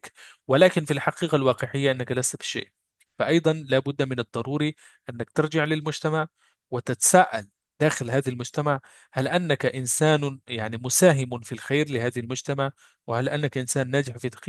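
No technical faults can be heard at any point in the speech recording. Nothing breaks into or disturbs the audio anywhere along its timeline.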